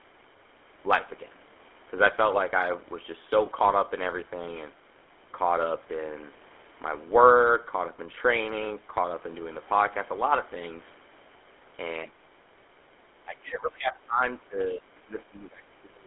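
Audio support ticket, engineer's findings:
GSM full-rate codec, whole clip: buzzy, gravelly roughness on all the speech, band squeezed to about 300 Hz to 3.4 kHz. The pulse-train excitation plus vocal-tract model smears detail, which fits 13 kbps full rate. Call mic processing's bass cut is present and expected.

Lost GSM frames, 3.46 to 3.49 s: brief metallic ring where the sound should move on. Decoder held the last good frame's parameters and repeated them, which fits a single dropped 20 ms frame. Too short to fade out fully.

Speech suppressed in double talk, three spots: 12.05 to 12.33 s, dip of about 20 dB; 13.25 to 14.22 s, about 25 dB down for roughly a second; 14.39 s to the end, about 25 dB down over roughly a second and a half. Speech ducks. Likely the echo canceller clamping both directions while the far end talked, unable to tell near speech from loudspeaker echo.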